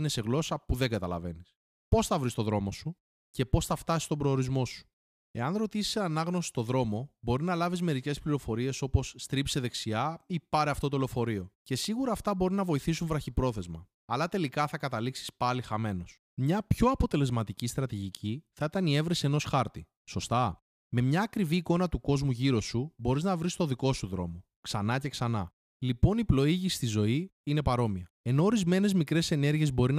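No technical faults are audible anywhere in the recording.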